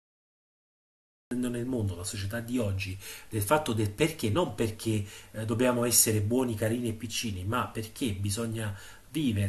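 Cut-off start, from 0.0 to 1.31 s: the capture or stream began late, so the clip opens on digital silence and then drops straight into the speech mid-sound at 1.31 s. There is no natural attack or fade-in, just an abrupt entry partway through an utterance.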